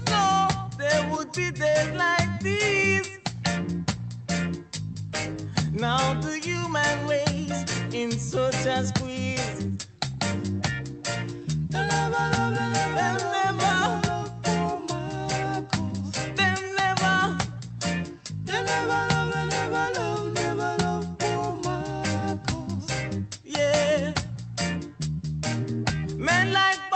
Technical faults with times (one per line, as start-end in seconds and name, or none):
none